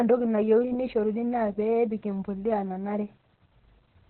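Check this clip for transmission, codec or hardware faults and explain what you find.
One codec fault runs through the whole clip. Opus voice compression: the speech sounds muffled, hoarse and faintly robotic, with nothing above about 4.2 kHz. Opus has dropped to narrowband SILK and coded the excitation coarsely, which points to a bitrate near 8 kbps.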